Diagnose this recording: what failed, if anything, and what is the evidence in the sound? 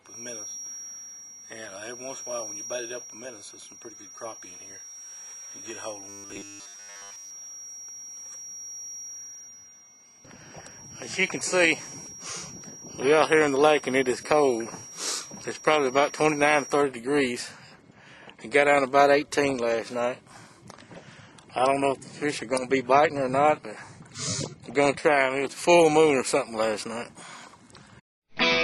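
A feedback whistle sits at 5.7 kHz from 0.0 to 16.87 s, about 20 dB below the sound, with a level that swells and fades slowly. The likely cause is the acoustic loop from loudspeaker to microphone poised at the edge of oscillation. That wavering sets it apart from a steady interference tone.

From 6.09 to 7.31 s a rigid, metallic 100 Hz buzz appears, with most of it replaced by repeats. This is robotic sound from repeated short buffers, likely at the driver or buffer stage, and it fits a 10 ms buffer being replayed. That locked pitch distinguishes it from codec warbling.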